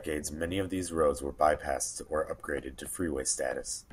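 A short speech recording with nothing technically wrong to report; the signal holds steady throughout with no audible faults.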